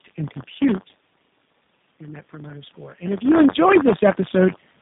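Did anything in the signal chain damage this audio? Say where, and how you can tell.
Yes. At the driver or buffer stage there is buffer tearing for the whole clip: a steady robotic buzz at about 93.8 Hz, which fits a 512-sample buffer, and it is present only while speech is present. The writer and reader pointers have slipped, so a small slice of each period, roughly 4 percent, replays audio from about 30 ms earlier with hard joins. Because the buzz follows the buffer rate and not the talker, it is not codec roughness.

The codec stage shows tandem speech coding throughout. The speech sounds rougher, more muffled and more warbly than one low-rate coder would make it, and nothing is left above 3.8 kHz. The call passed through two speech codecs in a row, ending in G.729A, and the audio was decoded and re-encoded at a border, so the second coder worked on already degraded input. Unlike the buffer buzz, this is a smeared, watery texture with no fixed repetition rate.

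In call processing, automatic gain rising runs from 1.98 to 3.84 s. The gain climbs by about 8 dB after the input fell by about 15 dB, and the voice and the room noise swell together over nearly two seconds. The talker moving at around 2.5 s also changes the level, but it changes only the voice. Here the background rises with it, which shows that the gain control is responsible and not the talker's position.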